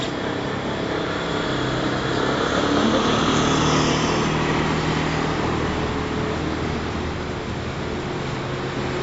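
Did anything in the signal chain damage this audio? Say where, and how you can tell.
Yes, at the codec stage, throughout the clip: nothing survives above 7.6 kHz, and the sound is dull and smeared with a warbling or fizzy texture, likely from AAC compression. Quantising against a hearing model with a lowered cut-off leaves this empty top band, which fits roughly 24 kbps AAC-LC.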